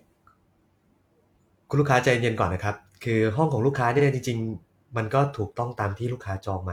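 At 3.95 s a brief stutter reveals repeated frames: 46 ms of compressed speech plays twice, lengthening the clip, whereas a dropout would leave a gap.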